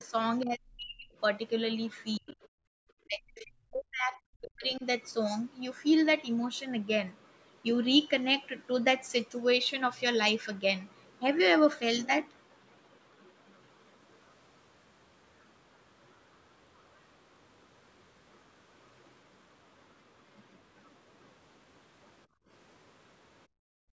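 Speech suppressed in double talk dips the speech by about 10 dB at 0.0 to 0.13 s, then cuts it by up to about 40 dB at 0.44 to 1.16 s, about 35 dB at 2.18 to 2.40 s and about 40 dB at 3.05 to 4.85 s. On the waveform the envelope collapses, and the spectrogram goes dark across its band, which stops at 8 kHz. The likely cause is an echo canceller that heard both parties at once and turned everything down.

Inside the 2.18 s dip, at 2.28 to 2.33 s, a faint scrap of the other side's voice is leaking through, around 30 dB below the speech. It shows as a brief, weak smear of energy, likely loudspeaker echo the canceller missed.

The background is gated by the echo canceller at 2.68 to 2.77 s (about 38 dB), 22.26 to 22.49 s (about 23 dB) and 23.47 s to the end (about 39 dB). Each time, the room noise floor dips sharply, which appears as darker gaps on the spectrogram and lower stretches on the waveform.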